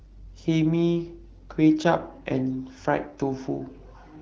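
Nothing stood out on listening to this speech clip, which carries the character of AMR wideband (HD Voice) coding at 12.65 kbit/s.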